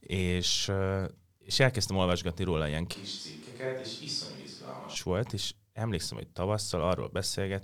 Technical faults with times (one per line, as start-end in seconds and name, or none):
2.96-4.95 switch to a distant microphone